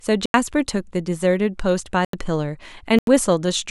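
Speech clip with three short drops to digital silence, around 0.26 to 0.34, 2.05 to 2.13 and 2.99 to 3.07 s. Each hole lasts about 85 ms, which fits output buffers of 4096 samples not being filled in time.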